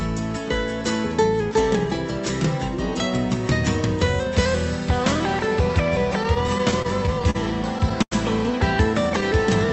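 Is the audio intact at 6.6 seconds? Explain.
No, 6.6 s sits inside a burst of repeated stalls (stutter) running from 6.23 to 7.37 s. Packets arrived late, the jitter buffer kept running dry, and the receiver stretched the last sound to cover each gap, the longest about 42 ms. Nothing's lost, but it drags and stutters.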